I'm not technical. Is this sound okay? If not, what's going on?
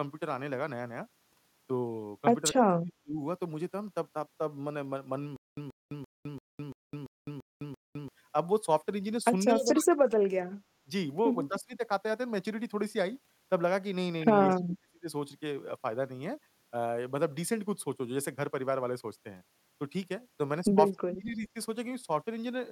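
No. Speech suppressed in double talk happens at 2.6 to 3.17 s, 9.54 to 10.27 s, 10.83 to 10.9 s, 11.49 to 11.82 s, 14.49 to 15.08 s and 20.96 to 21.55 s. The speech drops sharply or briefly vanishes, likely because someone on the other end talked at the same time and the call's echo cancelling turned everything down.

Stutter with silent gaps runs from 5.36 to 8.08 s. A short burst of about 130 ms repeats eight times, each followed by about 210 ms of dead silence. This is likely a stalled stream replaying its last scrap, and the speech meant for that stretch is lost.

Echo leak appears at 9.64 to 9.74 s as a faint copy of the speech arriving about a quarter-second late. It likely comes from a loudspeaker on one end whose sound got back into the microphone.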